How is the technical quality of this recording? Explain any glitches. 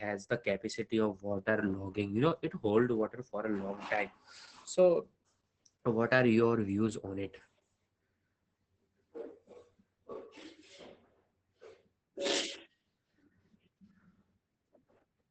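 The recording is low quality, with heavy codec damage throughout and one glitch near the end.

Opus voice compression affects the whole clip. The speech sounds muffled, hoarse and slightly robotic. Nothing is heard above about 8 kHz, so the sibilants lack air. This points to Opus in its SILK linear-prediction mode at a low bitrate, around 10 kbps. At that rate the coder describes the excitation coarsely, and that strips texture and roughens the voice.

At 13.43 s there is a small jump in the sound. The likely cause is a dropped buffer (overrun). The program failed to read its samples before the hardware overwrote them. A few milliseconds of audio vanished, and the two sides were joined directly. No silence fills the gap, so the speech simply skips ahead.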